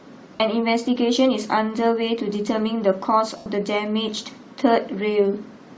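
Throughout the speech there is a breathy, grainy edge with thinned upper frequencies, likely Bluetooth LC3 compression at a low rate, consistent with roughly 32 kbps and 10 ms frames. At 0.36 s to 0.40 s, lost LE Audio frames cause a 40 ms noisy smear where the decoder repeats the last spectrum with scrambled phase. At 3.37 s to 3.46 s, a longer 90 ms loss smears further and then fades toward silence.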